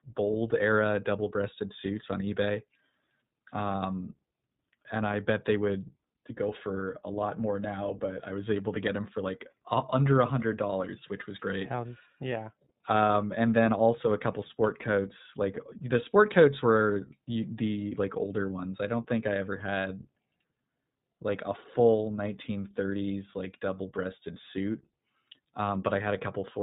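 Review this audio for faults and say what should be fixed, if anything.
The speech was passed through the iLBC codec across the whole clip, coding each short frame independently, which fits 20 ms frames at roughly 15 kbps. Nothing above 4 kHz survives, and the voice comes out plainly rough and synthetic. Keep this stage wideband, using Opus or linear PCM instead.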